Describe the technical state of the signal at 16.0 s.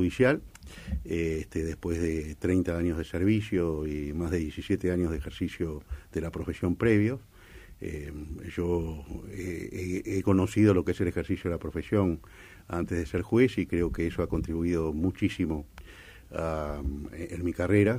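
At 16.0 s the signal is intact, with no dropout, distortion or other technical fault audible at that moment.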